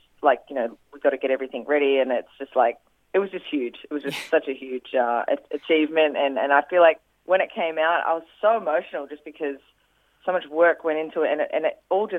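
No technical faults can be heard anywhere in the audio, and the signal stays continuous and stable throughout.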